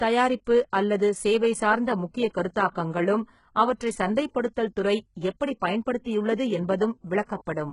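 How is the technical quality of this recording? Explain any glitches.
Technical quality is fairly poor: the whole clip carries heavy, low-bitrate codec damage, and there's one smeared attack early on.

The codec damage runs the full length. The treble sounds synthetic, with s sounds coming out gritty and lispy, and nothing at all above about 11.1 kHz. That's likely HE-AAC compression, probably the v2 flavour at something like 12 kbps. Only the lower band is really coded; the top is rebuilt by copying lower bands upward under a coarse envelope, so the harmonics don't line up.

At 2.53 s there's pre-echo: a short hiss spreads about 28 ms ahead of a sharp onset, softening its edge. The transform block spreads quantisation noise evenly across its length, so noise sized for the loud attack also leaks into the quiet stretch just before it. At this compression level the noise is coarse enough to hear as a brief smudge rather than a clean start.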